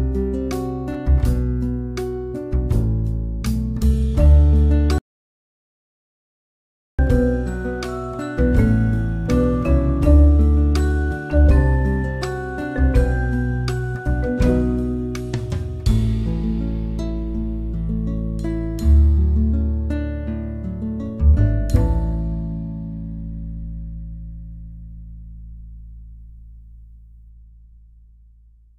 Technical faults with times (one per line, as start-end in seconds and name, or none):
4.98-6.99 audio dropout to silence